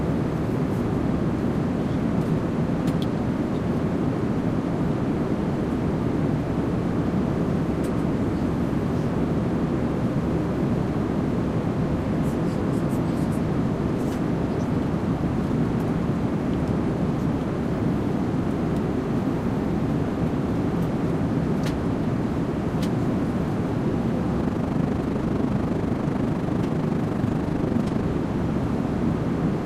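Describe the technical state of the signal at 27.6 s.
At 27.6 s you're inside a stretch of overlap-add ripple running from 24.4 to 28.07 s. The frames were rejoined with windows that don't sum flat, so the level dips about 6 dB once per frame, around 30 times a second, giving a rough, fast flutter.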